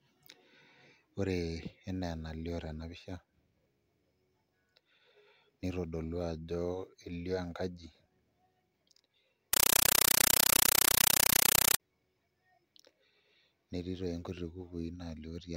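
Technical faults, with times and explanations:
9.53–11.80 s, compressed stream played as audio: a Dolby Digital (AC-3) bitstream reached the output undecoded and was treated as ordinary samples, so the speech is replaced by very loud, chattering static. Each coded frame plays as a burst of noise about 8 ms long followed by silent padding, repeating 31.25 times a second, and that steady rattle fits AC-3 frames at 384 kbps.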